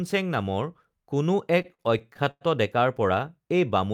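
A speech clip with repeated stalls (stutter) from 1.59 to 2.43 s: eight held gaps, about 213 ms in all, appear as smeared, frozen spectrogram frames. Late-arriving packets repeatedly emptied the jitter buffer.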